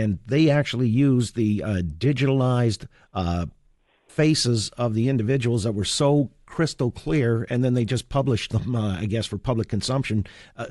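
From start to finish the speech carries plainly audible codec damage, most likely Bluetooth LC3 compression. The transform codec spends a limited bit budget per frame, so upper-spectrum detail is discarded and replaced with shaped noise. The result is a breathy, grainy edge on the voice rather than clean high-frequency content. The degree of roughness fits a bitrate around 48 kbps, and the granular texture points to short 7.5 ms frames.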